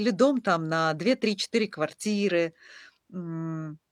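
Nothing in this bit of speech stands out as a technical problem; there's no moment where the audio trips up or goes wrong.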